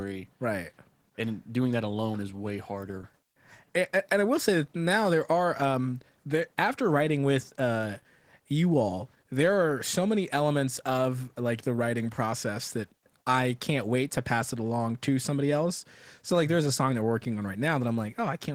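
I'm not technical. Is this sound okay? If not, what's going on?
No. Throughout the recording, the speech was squeezed hard by Opus voice compression, which rebuilds the voice from a rough model and fills in the higher range with a coarse approximation. The result is speech that sounds slightly hoarse, rough and a little robotic.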